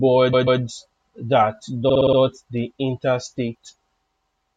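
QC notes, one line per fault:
0.32–0.60 s, repeated frames: a 139 ms block plays twice more, a stutter adding 279 ms. The waveform shows identical segments.
1.88–2.17 s, repeated frames: a 48 ms block replays five extra times, a rapid stutter adding 290 ms. The spectrogram shows one slice tiled.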